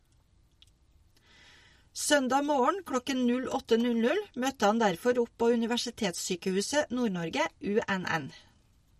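Throughout, the speech loses everything above 15.1 kHz and sounds watery and swirly, likely from MP3 compression. Unlike a plain low-pass filter, faint detail flickers between frames.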